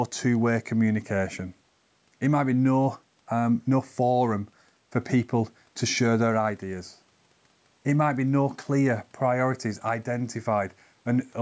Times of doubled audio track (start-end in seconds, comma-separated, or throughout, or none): none